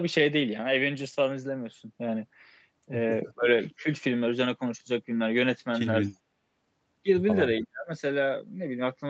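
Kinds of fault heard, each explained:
Speech suppressed in double talk: The sound dips three times, by about 20 dB at 3.26–3.47 s, about 10 dB at 3.78–3.87 s and about 40 dB, almost a cut-out, at 7.63–7.89 s. The likely cause is an echo canceller ducking this talker while the far side spoke. Unlike packet loss, these are level dips rather than glitchy gaps.
Echo leak: From 6.04 to 6.16 s a faint copy of the sound trails 288 ms behind, at about 35 dB below the main level, likely loudspeaker pickup the echo canceller failed to remove. Unlike room reverberation, it is a distinct delayed repeat rather than a smooth decaying tail.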